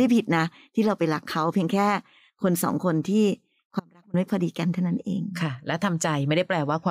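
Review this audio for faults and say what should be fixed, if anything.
Audio dropout to a faint residue, 3.80 to 4.14 s: the speech cuts abruptly for 340 ms to a faint residue about 30 dB down, likely a brief upstream signal loss. Securing cables and connectors and monitoring the input feed during capture should prevent it.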